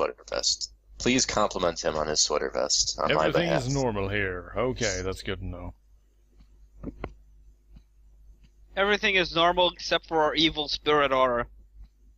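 At 1.89 s there is a sudden jump in the sound, with no silent gap, unlike a dropout that leaves a brief hush. The likely cause is a dropped buffer (overrun): roughly 10 ms of audio was overwritten before being read, and the two sides were spliced together.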